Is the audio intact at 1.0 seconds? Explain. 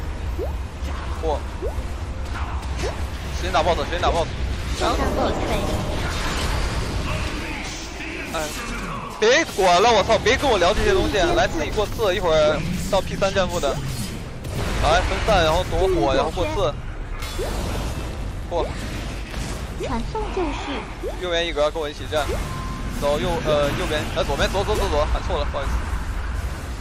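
Yes, the audio is intact at 1.0 seconds, with no dropout, click, distortion or other fault at that moment.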